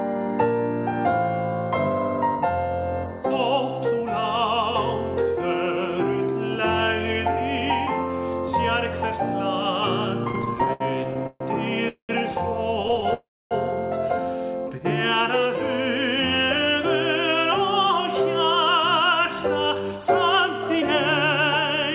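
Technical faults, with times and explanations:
10.24–11.42 s, repeated stalls (stutter): the sound catches and drags 18 times, with about 360 ms of filler inserted in total, roughly 30% of the stretch. The longest hold lasts 136 ms. Packets arrived late, the jitter buffer kept running dry, and the receiver stretched the last sound each time. On a spectrogram, short smeared, repeated slices interrupt the normal texture. The waveform shows small plateaus where nothing new advances.
11.88–12.11 s, call audio freeze: a 206 ms hole in which the last sound buzzes on briefly and then drops to about 110 ms of silence. Playback resumes where it stopped, so nothing is lost. The delay simply grows by that amount, likely from packets held up in transit while the buffer was empty. A spectrogram shows a fading smear followed by a blank column. The waveform decays to flat.
12.83–13.12 s, repeated stalls (stutter): a shorter, finer flutter of 7 tiny holds, none longer than 13 ms, totalling 68 ms, or about 24% of the span. 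Late packets starve the buffer repeatedly, giving a jittery, slightly choppy texture. A spectrogram shows thin repeated vertical seams. The waveform has brief repeated cycles.
13.14–13.53 s, call audio freeze: a longer 371 ms stop in which the held sound fades into about 280 ms of silence before the audio picks up again, adding that much delay. A spectrogram shows a wide blank band after a short decaying smear. The waveform goes flat.
17.58–21.43 s, jitter buffer speed-up: the sound runs about 4% fast at unchanged pitch, as the receiver trims pitch-period-sized pieces, roughly 0.15 s in all, to shed excess buffered delay. A spectrogram shows harmonics at normal spacing but events arriving slightly compressed in time. The waveform has splice points rather than visible gaps. Throughout, the call path's band-limiting leaves nothing above 4 kHz.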